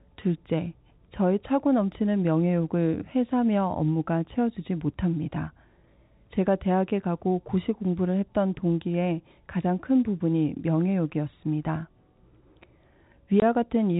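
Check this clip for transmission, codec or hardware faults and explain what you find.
One transmission fault is present: packet loss filled with silence, in a speech clip carried over G.711 telephone coding, which passes nothing above 4 kHz.

From 13.4 to 13.42 s, near the end, the speech drops out completely for 20 ms. Packets went missing in transit, and the receiver played nothing in their place. The gap's length fits two 10 ms packets. Unlike concealment, which would smear or repeat the preceding sound, or a fade from a hardware dropout, this hole is pure silence with abrupt edges, and its length matches whole packets.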